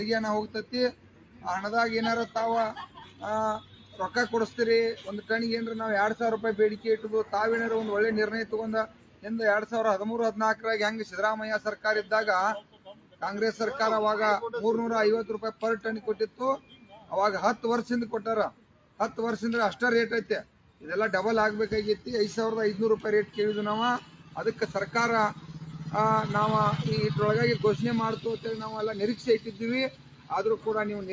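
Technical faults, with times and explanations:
Throughout: noise suppressor applied to music or sounds. A suppressor built for speech stays active for the whole clip and treats sustained, non-speech material as noise. Its gain keeps shifting by around 10 dB, so the level pumps and flutters, and held parts and tails thin out while sharp onsets pass. Separately, the call microphone chain limits the audio to nothing above 8 kHz, which is normal band-limiting, not a fault.
0.47–5.06 s, 6.77–7.33 s, 8.87–9.26 s, 10.56–13.22 s, 15.53–19.0 s, 20.43–20.84 s, 23.27–25.81 s, 28.37–30.66 s: sound cut by the noise suppressor. In each span the suppressor judges a passage to be noise and pulls it down harder than its surroundings, by about 10 to 12 dB at the deepest. Steady and decaying material sinks or has its tail chopped, while transients survive. Unlike a dropout, the sound never vanishes entirely. 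The affected portions add up to roughly two seconds in the longest span and under half a second in the short ones.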